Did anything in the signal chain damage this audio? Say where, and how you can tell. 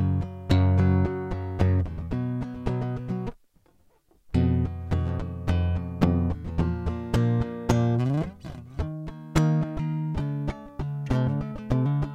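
Yes. From 10.16 s to the end at 12.14 s, the music drops about 1.5 semitones and slows to 0.92 speed. This is a wrong sample rate at playback, consistent with 48 kHz material played at 44.1 kHz.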